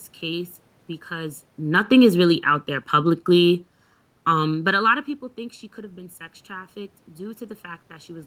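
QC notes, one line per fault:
throughout: channel delay (comb filtering), one channel lagging by under a millisecond before the mono sum, so notches from around 700 Hz upward leave the speech hollow and phasey.
1.59–3.59 s: automatic gain falling, the gain control easing level down by about 5 dB over two seconds, so speech and room background sink together.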